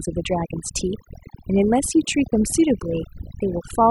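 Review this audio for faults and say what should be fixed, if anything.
Overdone noise removal runs throughout: bands near the noise estimate are gated off, leaving twinkling specks rather than the steady hiss of light denoising. Set the reduction gentler.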